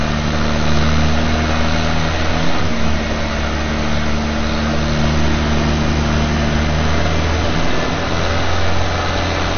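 From start to finish the audio is dull and granular, with nothing above 6.5 kHz and a gurgling, coarse texture that is plainly audible. The likely cause is MP2 compression at a low rate, consistent with roughly 48 kbps: Layer II divides the spectrum into 32 equal sub-bands and, short of bits, switches upper bands off and quantises the rest crudely. Unlike a simple low-pass filter, the surviving bands flicker and grain.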